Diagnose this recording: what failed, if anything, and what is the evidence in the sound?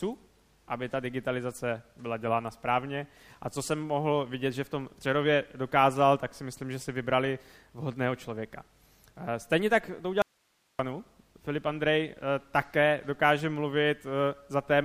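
Audio dropout to a faint residue from 10.22 to 10.79 s: the sound cuts off abruptly and only hiss remains, about 45 dB below the signal, for 0.57 s. The waveform collapses to a thin noise band and the spectrogram shows a flat grey strip with sharp edges. The cause is likely a momentary break in analogue wiring upstream while the later stages stayed live.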